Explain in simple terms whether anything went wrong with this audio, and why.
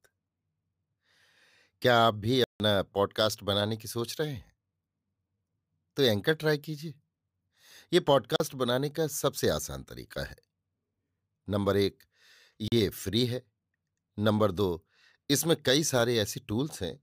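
Block of digital silence, three times: 2.44 to 2.6 s, then briefly at 8.36 s and 12.68 s. In each spot a chunk of the speech is replaced by silence, so the sound switches off and back on with no fade. The first gap lasts 160 ms and is heard as a short hole. The later two last only 40 ms and come across as shorter holes. This likely happens when the program fails to deliver its next piece of audio in time and the output is filled with nothing.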